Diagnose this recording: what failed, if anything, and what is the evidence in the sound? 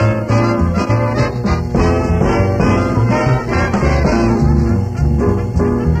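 A steady low tone at 60 Hz enters at 1.11 s and sits under the sound until the end at 6.0 s. It is prominent, only about 10 dB below the programme, and never fades. This is mains hum, a fault in the analogue wiring stage. A ground loop or a nearby transformer couples the 60 Hz power line into the signal path.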